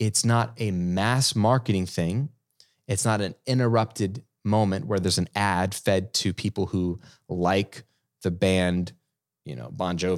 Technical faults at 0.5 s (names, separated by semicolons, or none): none